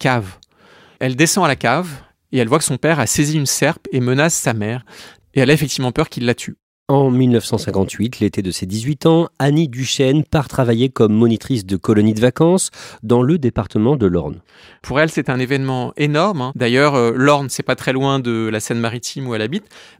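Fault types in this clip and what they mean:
De-emphasis applied wrongly: a treble cut that wasn't needed dulls the speech from 13.35 to 15.36 s, dropping the top smoothly, about 10 dB down at 10 kHz.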